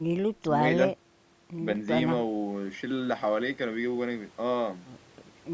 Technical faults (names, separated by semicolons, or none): none